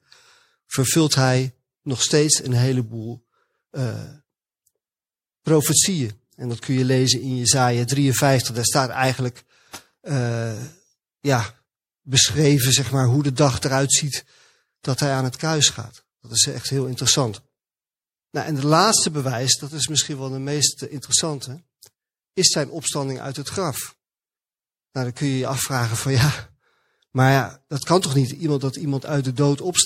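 A speech recording carries plainly audible MP3 compression damage from start to finish. The sound has a watery, swirling texture. That character points to a starved MP3 encoder, likely at a low bitrate around 64 kbps. With too few bits, the encoder discards quieter frequency detail. That detail flickers in and out between frames, which causes the swirl.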